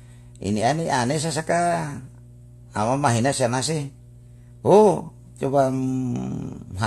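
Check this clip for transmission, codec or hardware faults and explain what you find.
There is one hardware fault, mains hum, running throughout the speech. A ground loop or nearby transformer couples the 60 Hz power line in, giving a steady low drone roughly 25 dB below the speech, seen as a constant horizontal line at 60 Hz on a spectrogram.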